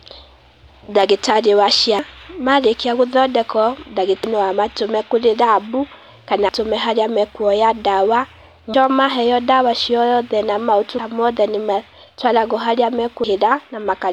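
The speech skips at 1.99, 4.24, 6.49, 8.74, 10.99 and 13.24 s. It is likely audio missing between chunks. About 0.3 s is lost at each joint of 2.5 s chunks, with the sides butted together. The first falls after "ndagĩtarĩ wa", another between "amatũme kũrĩ rabũ kana" and "harĩa makuoya".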